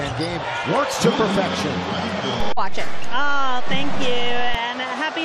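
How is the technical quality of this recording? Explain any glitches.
One fault mars the recording: a DC step. At 2.40 s the waveform's zero line jumps to an offset of about -14 dBFS and stays displaced until 4.55 s, when it returns. A shift like this comes from a converter recalibrating or an offset-carrying input being switched into the path. The jump itself is inaudible as a tone, but each edge registers as a low thump or click, one at 2.40 s and another at 4.55 s, while the sound carries on unaltered beneath it.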